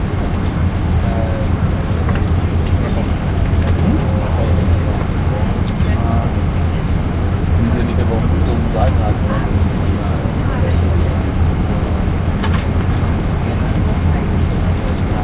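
No technical faults can be heard anywhere in this recording of sounds. Nothing in it interrupts or alters the audio at any point.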